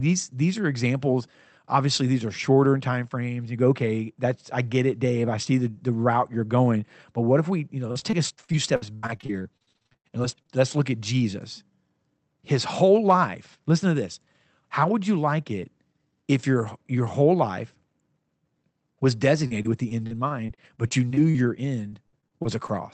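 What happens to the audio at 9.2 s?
At 9.2 s the speech is in the middle of a stretch of repeated packet loss (robotic sound), running from 7.87 s, just after "if we you know", to 10.51 s, before "let's look at". About two dozen short gaps, the longest 83 ms, leave roughly 28% of that span concealed. Each hole is papered over by extending the preceding audio, so the speech turns choppy, with pieces dropping out.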